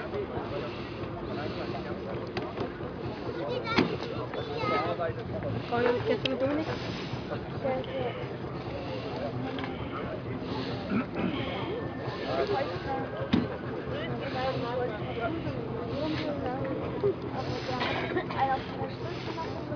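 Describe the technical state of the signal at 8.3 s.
At 8.3 s the signal is intact, with no dropout, distortion, glitch or other technical fault audible at that point.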